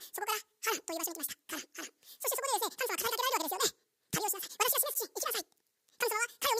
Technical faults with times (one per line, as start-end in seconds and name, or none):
0.00-6.60 audio read two samples at a time (double speed)